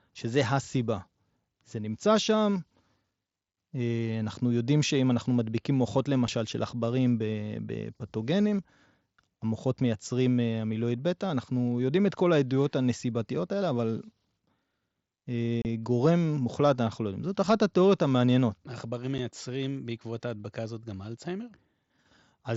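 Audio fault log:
6.27, 15.62 to 15.65 and 19.18: unconcealed Bluetooth headset packet loss. Short holes open in the speech, about 7.5 ms, 30 ms and 7.5 ms long. Headset audio packets went missing and nothing filled them. The edges are abrupt. Sound through the mSBC link runs up to 8 kHz.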